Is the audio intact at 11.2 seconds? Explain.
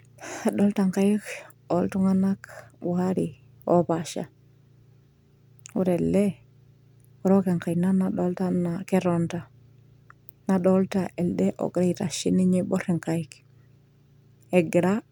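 Yes, at 11.2 seconds the speech plays through with no audible dropout, click, distortion or other fault.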